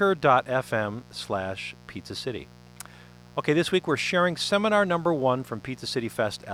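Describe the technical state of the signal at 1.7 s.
At 1.7 s, as through the whole clip, a mains buzz is riding under the speech. Interference from the 60 Hz supply has leaked into the signal path, with sharp switching spikes entering twice per mains cycle, 120 times a second, so a dense series of 60 Hz harmonics reaches up into several kHz. It sits roughly 25 dB below the speech and is heard as a steady, raspy buzz beneath it.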